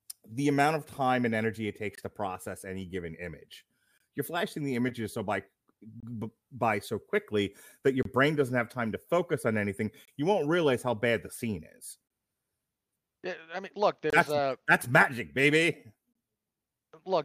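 The speech is broken by short, hard-edged holes of silence, each about 25 ms long, at 1.95, 3.98, 6.00, 8.03, 10.05, 12.08, 14.10 and 16.13 s. That steady rhythm is a gap between chunks: the audio arrives in 2.0 s blocks, and each join leaves a sliver of dead air, probably from padding or a late-starting playback of the next block. Nothing is lost, but the flow stutters at every boundary.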